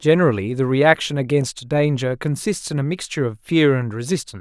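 No technical faults can be heard in the speech. There is nothing here to place on the timeline.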